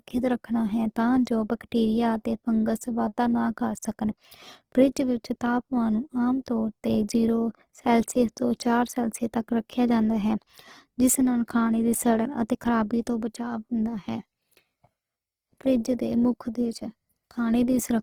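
Throughout the speech the sound is rough, grainy and noisy on sustained tones, yet keeps full bandwidth up to about 20.2 kHz with less swirling than MP3 would give. This is Opus compression, likely its music mode near 16 kbps, filling starved bands with noise or folded lower bands.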